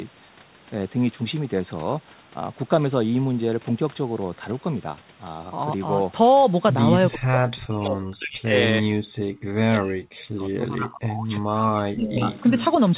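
From 7.12 to 7.37 s the speech dips by roughly 15 dB, and at 7.64 to 8.54 s, 8.80 to 9.11 s, 9.78 to 10.00 s and 10.32 to 12.30 s it drops by up to about 40 dB. This is speech suppressed in double talk, likely from an echo canceller ducking the talker while the far side spoke. On a waveform these show as sudden hollows in the envelope, and on a spectrogram the energy thins or vanishes. At 7.56 to 7.63 s a faint copy about 20 dB down appears, and at 12.07 to 12.76 s a stronger one about 10 dB down. Both trail the speech by 328 ms. This is echo leak, likely residual loudspeaker echo passing the canceller, and it shows as a delayed ghost of earlier spectrogram patterns. At 9.39 to 9.50 s the room sound falls by about 40 dB as background gated by the echo canceller, a brief near-silent gap in the noise floor. The band stops at 4 kHz, as expected from the G.711 call path.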